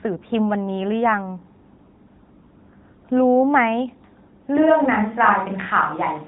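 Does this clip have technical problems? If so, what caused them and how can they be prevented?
Yes. An AMR narrowband mobile codec affects the whole clip. Nothing above 3.8 kHz passes, and at 10.2 kbps the speech is buzzy and synthetic, which a plain low-pass filter would not cause. To prevent this, record locally or send the audio over a wideband codec.

From 4.57 s to the end, the speech suddenly turns roomy and hollow with thinner bass, and room noise rises to about 30 dB below the speech while the level stays much the same. This is likely a switch to a distant microphone. The abrupt change sets it apart from reverb that builds gradually. To prevent this, secure and monitor the close microphone throughout the recording.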